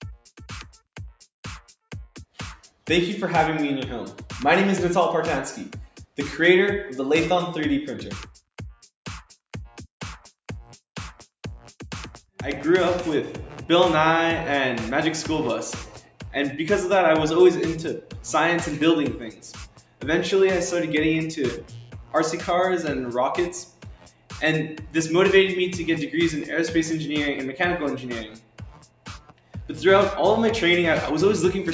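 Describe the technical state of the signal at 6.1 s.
A speech-tuned noise suppressor misjudged this sound as noise between 5.88 and 6.18 s, pulling it down by up to about 11 dB so it sinks and its decay is clipped short. Across the whole clip, that same suppressor treats sustained material and tails as noise, so levels swing by around 5 dB, making the sound pump and thin out around this moment.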